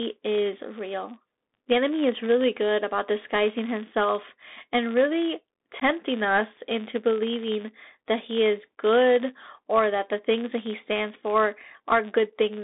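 A steady 100 Hz buzz runs through the whole clip and swells and fades with the speech's level. A filter restarted on every block starts each block from silence, leaving a small tick at the block rate, which fits blocks of 10 ms.

The speech is also narrowband throughout, confined to roughly 250 Hz to 3.7 kHz, with scratchy s sounds and a granular hiss beneath. That is the Bluetooth CVSD headset codec, whose one-bit adaptive steps can't follow fast high-frequency detail.

At 5.80 to 5.83 s, between "disguising himself and really" and "us into believing that", a hole of about 15 ms opens with abrupt edges. This is unconcealed Bluetooth headset packet loss: a couple of voice packets went missing and nothing filled the gap.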